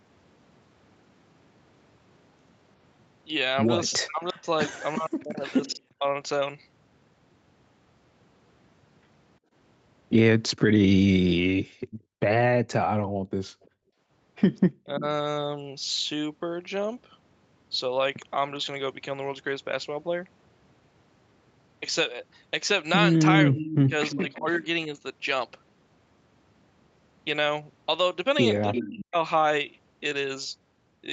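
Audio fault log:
3.91–5.76 s, 13.62–15.0 s, 23.57–24.66 s and 28.73–28.92 s, echo leak: a copy of the speech trails the original by about 344 ms. It's barely there early on and gets noticeably louder by the last burst. The likely cause is a far-end loudspeaker whose echo canceller let some of its mic pickup slip back.
4.0–6.05 s, 14.84–15.05 s, 23.47–24.97 s and 28.78–29.16 s, speech suppressed in double talk: the main voice dips or breaks up in chunks while that echo is playing. The drops are deep around 5 s and 29 s and milder near 15 s. This is likely the canceller ducking everything because it couldn't tell the two sides apart.
9.39–13.99 s, background gated by the echo canceller: the room tone drops out by about 40 dB, around a second and a half in all, then comes back. The canceller clamped the mic while the loudspeaker was active and released it afterwards.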